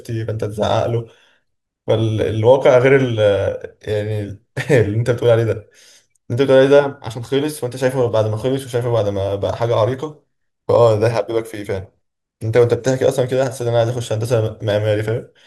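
Nothing in this speech recording stands out as a technical fault, so there's nothing to flag anywhere along the way.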